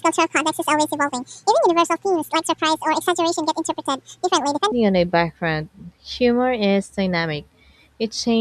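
Right from the start until about 4.72 s, the speech runs as a section at the wrong speed: it's going 1.75 times too fast, so the talker sounds rushed and chipmunk-like, pitched up by roughly ten semitones. Because speed and pitch shift together, the whole stretch feels squeezed rather than just hurried. It's likely down to that portion being played or resampled against the wrong clock, and at 4.72 s the pace and pitch snap back.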